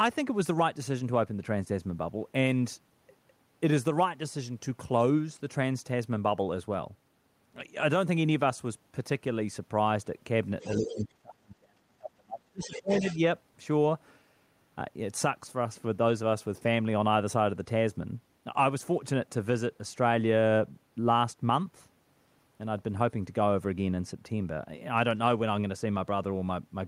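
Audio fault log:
10.61–11.05 s and 12.63–13.16 s, other side's voice leaking through: a second, fainter voice sits about 15 dB below the talker, likely loudspeaker echo the canceller left in the microphone signal. Unlike crosstalk, it appears only in these short scraps beside the double-talk dip.
10.78–13.2 s, speech suppressed in double talk: the talker's own voice sinks, at its deepest by roughly 35 dB, for about two seconds in all, likely because the echo canceller turned everything down while both sides spoke. Unlike a network dropout, the loss follows the overlapping echo rather than cutting cleanly to silence.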